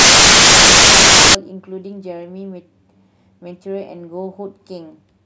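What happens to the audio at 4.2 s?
Nothing goes wrong at 4.2 s; the speech carries on intact through that moment, with no dropout, click or distortion.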